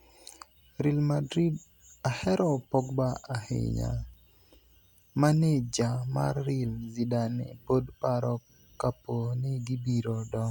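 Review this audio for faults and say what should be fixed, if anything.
Nothing here needs fixing; I listened through and didn't hear any problems worth flagging.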